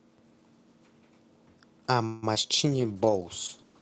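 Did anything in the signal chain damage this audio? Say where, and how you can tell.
Yes. From 2.05 to 2.52 s the speech turns choppy and robotic, with four dropouts (the longest about 170 ms) covering roughly 44% of that stretch. This is repeated packet loss on the network: each lost packet is concealed by stretching the preceding sound, and the next loss follows quickly.

From 2.66 s to the end the speech sounds rougher and more watery, which fits a call bitrate drop from about 32 to 11 kbps. When the call's bandwidth estimate fell, the Opus encoder was forced to spend far fewer bits and quantise the signal much more coarsely.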